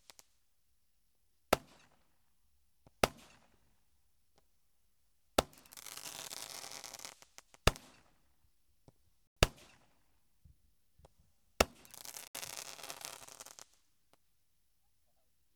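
Everyday sound with two brief holes: at 9.27 s it cuts to about 94 ms of silence, and at 12.28 s to about 70 ms. That pattern is likely a Bluetooth stall, with the receiver's buffer draining while delayed packets were resent.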